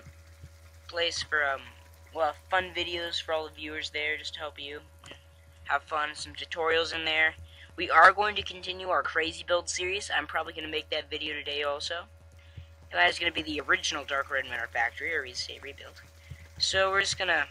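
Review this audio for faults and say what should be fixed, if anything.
Nothing stood out on listening, so there is nothing here that needs fixing.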